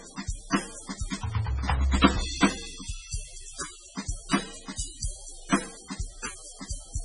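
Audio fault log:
Throughout, MP3 compression: the music was likely run through an MP3 encoder starved of bits, which fits a rate near 16 kbps. It cuts the treble off above 10.5 kHz and lets weak frequency lines flicker between frames, giving a heavy watery swirl and smeared attacks.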